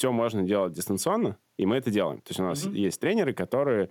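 Nothing technical goes wrong anywhere in this bit of speech, so there's no fault here to point to.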